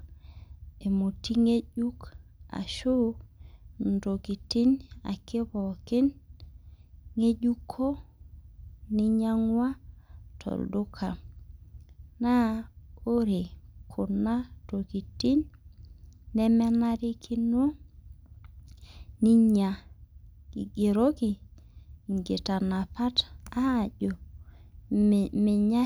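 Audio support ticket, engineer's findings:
Listened through the speech recording and nothing stood out, so there is nothing to report against this ticket.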